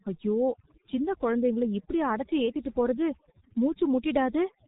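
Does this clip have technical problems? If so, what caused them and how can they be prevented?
Yes. Throughout the clip, overdone noise removal is at work. A noise reducer was set far too aggressively, so it pushed individual frequency bands down or out whenever they came close to its estimate of the background noise, and it took the softer parts of the speech along with them. The background drops and breaks up into twinkling specks. Using a gentler reduction setting, or recording in a quieter space, avoids this.

The speech has also passed through the G.723.1 codec, a low-rate telephony codec working on 30 ms frames. Its damage here is heavy, consistent with the codec's 6.3 kbit/s mode. Nothing above 3.8 kHz survives, and the slowly updated voice model smears fast changes, so the speech sounds muffled and hoarse with blurred consonants. Choosing a wideband codec at a higher bitrate prevents this.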